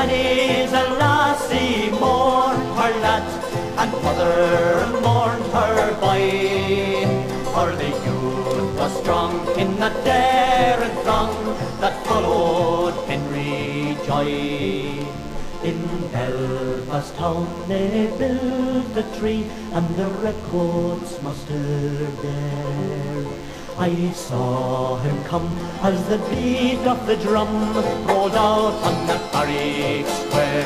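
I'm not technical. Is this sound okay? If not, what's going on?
No. A nearby DECT cordless phone's radio bursts, 100 times a second, leak into the audio circuitry, causing DECT cordless phone buzz: a thin, steady buzz under the sound throughout.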